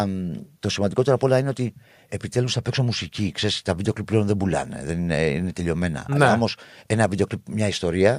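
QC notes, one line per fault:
No faults found in the speech recording.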